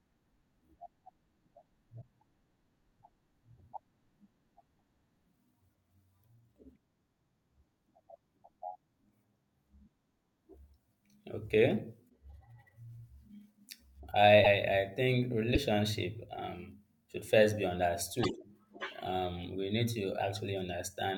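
Seven short glitches, at 2.01–2.03 s, 4.60 s, 8.15 s, 12.09–12.11 s, 14.44–14.46 s, 15.54–15.57 s and 18.23–18.26 s (the last right after "um should first be"), each a sudden skip forward. This is likely a broken MP3 bit reservoir: after lost frames, the next frame read its borrowed bits from the wrong bytes. On a spectrogram each appears as a thin vertical mark at most about 28 ms wide; the waveform shows a discontinuity.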